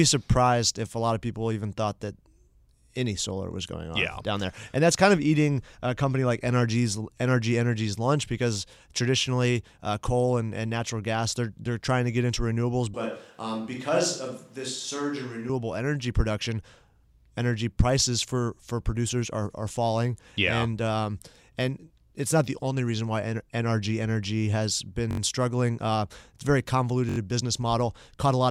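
A switch to a distant microphone runs from 12.94 to 15.49 s, between "to get into renewables" and "energy production". The speech turns hollow and roomy, loses bass, drops about 5 dB and carries a faint room noise, likely because the close microphone dropped out.

A repeated buffer occurs at 25.11 to 25.20 s and again at 27.09 to 27.18 s, just after "it's a very". Audio arrived late, so a 21 ms piece replayed four extra times, fitting a 1024-sample buffer, and was heard as a short stutter.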